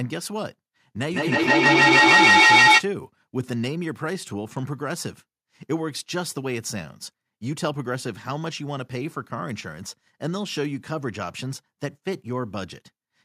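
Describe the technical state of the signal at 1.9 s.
At 1.9 s the speech is caught in a ringing, thinning echo that recurs roughly every 150 ms and builds to about 13 dB above the speech itself, from 1.13 to 2.88 s. This is feedback echo between two devices: one device replays the other's microphone, which picks it up again.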